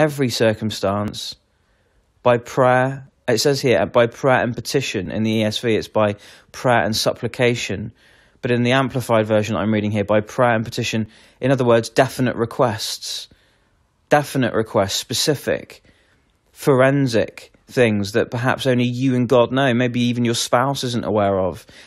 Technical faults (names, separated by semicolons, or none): overlap between stream segments